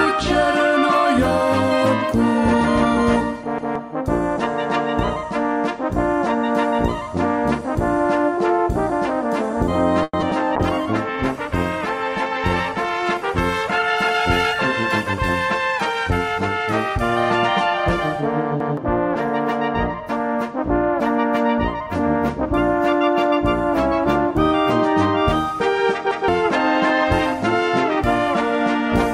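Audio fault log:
3.58 s, 18.60 s and 26.11 s: repeated buffer. Each time a block of about 0.17 s plays twice with a hard join, which fits an 8192-sample buffer. It is heard as a stutter, and roughly 0.15 s of audio is skipped. On a spectrogram an identical slice appears twice, with a vertical seam at each join.
10.03–10.15 s: call audio freeze. The last sound is drawn out for 0.1 s as a fading buzz, ending in a 20 ms silence, and then the audio resumes where it stopped, with nothing missing and everything afterwards 0.1 s later. The likely cause is delayed packets draining the jitter buffer. A spectrogram shows smeared, decaying horizontal bands, then a narrow blank strip.
10.21–10.24 s and 10.30–10.33 s: short concealed packet loss. In each, 20 ms of audio is lost and 10 ms of synthesised continuation stands in before blending back, heard as a brief smear or wobble. The waveform shows a small dip or irregular patch, and the spectrogram a slightly blurred sliver.
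10.57–17.57 s: call bitrate drop. The encoder's rate falls from 128 to 22 kbps and stays at its lowest for about 3.2 s, so the sound turns rough, watery and muffled. A spectrogram shows the upper frequencies cut away and coarse, blocky detail until the bitrate recovers.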